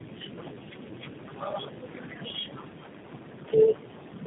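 Speech throughout, with tandem speech coding audible from start to finish. Nothing sounds above about 3.8 kHz, and the voice is rough, muffled and warbly. That is more damage than one low-rate codec leaves, because each coder re-encodes the previous one's artefacts. That stacking separates it from a single narrowband codec, which is band-limited but cleaner. The layered roughness points to three speech codecs in a row, ending in something like G.729A.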